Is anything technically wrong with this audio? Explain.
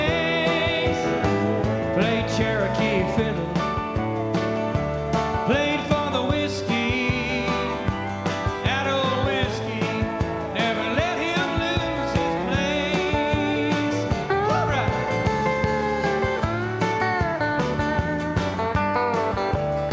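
No, nothing technical in this audio stands out as a problem, so there's nothing here that needs fixing.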